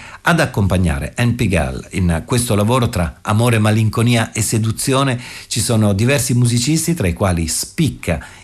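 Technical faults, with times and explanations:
No technical faults can be heard in this speech recording; the signal holds steady and intact from its first moment to its last.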